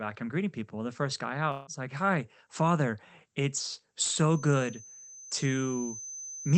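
It's a speech recording with two problems. From 1.51 to 1.70 s there's a long network dropout: the audio cuts out and the last bit of sound gets stretched into a fading buzz for about 150 ms before the speech picks up again with roughly 160 ms gone, likely from packets that never arrived. Then from 4.25 s to the end there's a feedback whistle, a thin steady tone at 6.2 kHz sitting well under the speech and slowly swelling and fading in level, likely from a speaker-to-mic loop right on the edge of howling.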